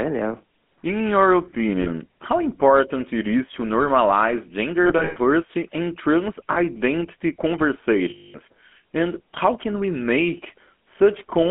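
Speech passes through the GSM full-rate codec, consistent with its 13 kbps coding, band-limited to 200 Hz–3.4 kHz, giving a plainly audible buzzy, gravelly roughness throughout. There are lost GSM frames, where the decoder repeats the last good frame at falling level, turning the sound into a rough metallic ring: at 1.82–1.89 s just before "how important it is", at 4.84–5.17 s after "it is to normalize", with gaps scattered over about a third of a second and the longest run about a tenth of a second, at 6.52–6.57 s after "and trans", and at 8.10–8.36 s, where 240 ms is replaced.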